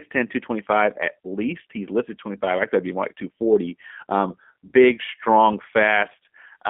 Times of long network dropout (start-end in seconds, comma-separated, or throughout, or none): none